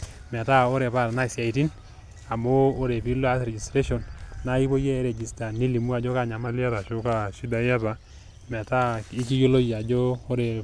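Speech, with a wrong sample rate fault from 6.47 s to 8.10 s. Over that stretch the audio runs slow and low, at about 0.92 times normal speed and roughly 1.5 semitones flat, which fits 24 kHz material played back at 22 kHz with no conversion. On a spectrogram the harmonics and formant bands sit visibly lower and the syllables are drawn out in time. The waveform shows correspondingly longer pitch periods.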